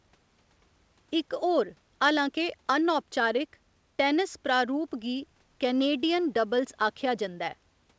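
No technical faults can be heard anywhere in the recording. The speech has come through a working call path whose codec leaves nothing above 8 kHz, which fits wideband G.722 coding.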